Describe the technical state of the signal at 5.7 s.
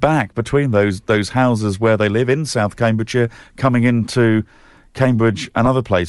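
Right around 5.66 to 5.68 s there's a lost LE Audio frame. The gap sounds like one dropped 10 ms frame, and the decoder fills it by replaying the previous frame's spectrum with randomised signs. Because the gap is so short, it never gets to the fade-out stage. What you hear is a tiny grainy smear, a brief noisy blur where the sound should carry on cleanly, rather than a click or a silent hole.

That blip sits on a signal that shows Bluetooth LC3 compression the whole way through, and it's plainly audible here too. This is likely the LE Audio transform codec running at a modest rate, something that fits around 48 kbps with 10 ms frames. Parts of the upper spectrum are zeroed and noise-filled, which gives the speech a breathy, grainy top edge at this moment and across the clip.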